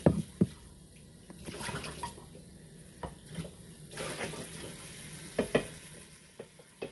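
An everyday sound recording carries plainly audible grainy, rough codec damage throughout, with nothing above 11.6 kHz. This likely comes from low-delay AAC compression (AAC-ELD) at a low rate near 32 kbps. Its short frames smear tonal detail into noise, unlike a clean low-pass cut.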